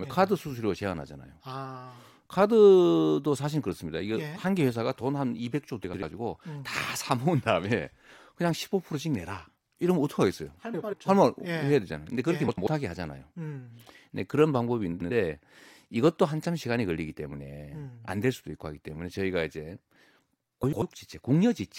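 A speech recording with five short bursts of frames out of order, at 5.84–6.03, 10.73–10.94, 12.48–12.67, 14.92–15.11 and 20.63–20.82 s. In each, two adjacent blocks of about 93 ms, consistent with runs of four codec frames, were decoded in swapped order, so the sound flutters briefly but loses no time. A spectrogram shows formant tracks breaking and jumping at three points per event.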